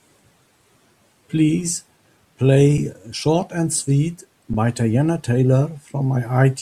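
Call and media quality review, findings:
Underrun with held sample at 2.78 s (about 3.4 ms) and 4.53 s (10 ms): speech briefly freezes on a flat held level, no click at onset. Output buffer ran dry; DAC held its last value. Playback resumes where it stopped, nothing dropped, so re-entry is soft.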